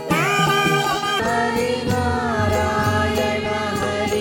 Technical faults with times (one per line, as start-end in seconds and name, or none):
0.00-1.20 section at the wrong speed
0.89-0.95 corrupt frame decoded